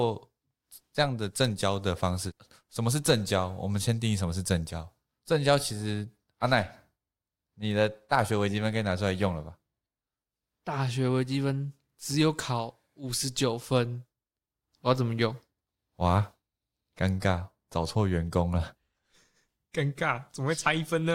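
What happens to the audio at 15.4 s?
Nothing goes wrong at 15.4 s; the speech continues intact through that moment with no dropout, click, distortion or other fault.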